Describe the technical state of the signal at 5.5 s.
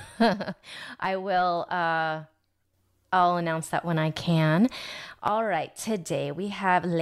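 The speech drops abruptly by about 6 dB from 5.28 to 5.79 s, likely because one channel drops out, halving the mono sum's shared content.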